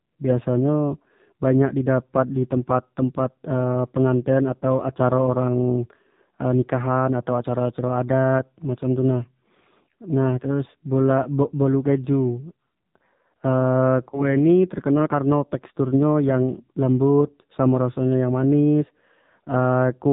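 Throughout, the speech passes through the AMR narrowband mobile codec at a low rate that fits about 5.9 kbps, so nothing above 4 kHz survives and the voice turns buzzy and synthetic. At 14.10 s, lost AMR speech frames: the decoder patches a gap of about 20 ms, consistent with a single frame, with repeated settings, giving a brief dip or warble until 14.25 s.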